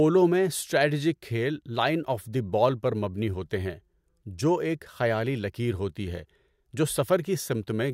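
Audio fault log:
No technical fault is audible anywhere in the speech, and the signal holds steady and continuous from its opening to its close.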